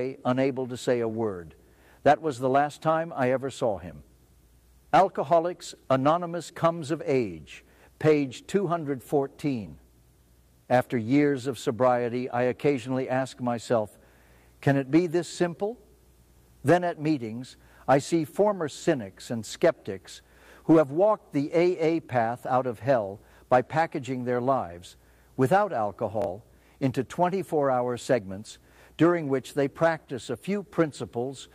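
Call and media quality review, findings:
Bluetooth stutter at 6.46–6.50 s and 26.22–26.27 s: lost packets, last buffer replayed for 23.2 then 46.4 ms. Waveform shows copied blocks; spectrogram shows vertical seams.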